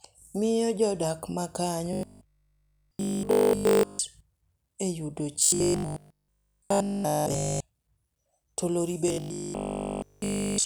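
New audio likely arrived too seldom, so essentially all of the time was filled by repeating a 20 ms buffer. This produced robotic sound from repeated short buffers, a rigid 50 Hz metallic buzz, from 1.93 to 4.01 s, 5.44 to 7.60 s and 9.08 to 10.64 s.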